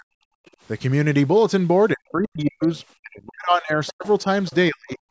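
From 0.00 to 0.25 s the speech is pulled down hard, by roughly 40 dB at its deepest, for around a fifth of a second. This is speech suppressed in double talk, likely caused by the echo canceller hearing both ends at once and attenuating the whole microphone signal rather than only the loudspeaker echo. The same dips recur from 1.94 to 2.64 s and from 3.00 to 5.00 s. In the last span roughly one and a half seconds of speech drops in level or breaks up.

At 0.46 to 0.50 s a faint scrap of a second voice appears, far below the main speech. This is the other side's voice leaking through, likely residual loudspeaker echo that the canceller failed to subtract from the microphone. Stronger leaks, around 20 dB under the speech, sit at 2.45 to 2.67 s and 3.87 to 4.07 s. A quieter one follows at 4.46 to 4.55 s. Each is short, and all three overlap the suppressed passages.

From 0.53 to 0.61 s the room tone drops by about 16 dB for roughly 70 ms and then returns. 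This is background gated by the echo canceller: while the far end was playing, the canceller clamped the microphone path, so the ambient floor briefly collapses instead of staying steady. The gate releases almost at once, which gives a brief hole in the background.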